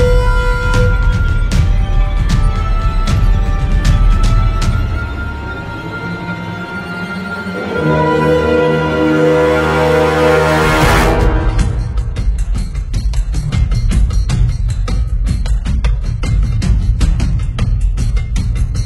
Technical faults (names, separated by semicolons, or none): adaptive stream at a lower bitrate